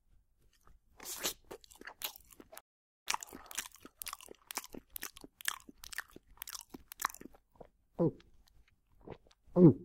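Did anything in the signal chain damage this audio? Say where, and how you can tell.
Yes. Playback stall at the playback buffer: the sound cuts out at 2.60 s and returns at 3.08 s, a roughly 0.46 s gap, likely from the player running dry.

Then time-compressed catch-up from 3.08 to 6.08 s: the sound runs about 1.15 times fast at unchanged pitch, from spliced, cross-faded slices.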